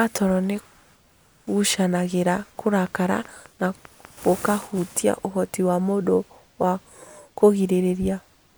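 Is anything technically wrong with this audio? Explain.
Yes. From 2.67 to 4.83 s, a train of clicks ticks regularly, about five per second, roughly ten in all, ending before "ũhoti wa mũndũ wa". They likely come from electrical interference.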